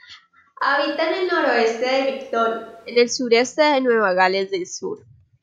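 From 0.62 to 2.96 s the close mic likely dropped out, a switch to a distant microphone: speech turns suddenly hollow, roomy, bass-thin and about 5 dB quieter.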